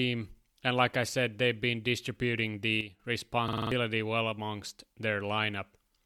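Just after "said they've been distributing", at 2.81 s, the level drops by about 9 dB in a single step and stays down until 3.0 s. The speech and the background noise fall together, with no fade. On a waveform, the envelope shrinks abruptly at one sample. On a spectrogram, every frequency band darkens at once along a clean vertical edge. This sudden gain jump was likely caused by a gain setting or bit shift applied without a ramp.

From 3.48 s to 3.72 s, right before "well amongst", there is a system hang loop. The driver stalled while the hardware kept replaying the same ring buffer. One 46 ms slice of audio repeats five times, which fits a 2048-sample buffer. At a loop rate of 21.5 Hz it sounds like a rattling machine-gun stutter, and around a fifth of a second of real audio is lost. The waveform shows identical copied blocks, and the spectrogram shows a repeating vertical pattern.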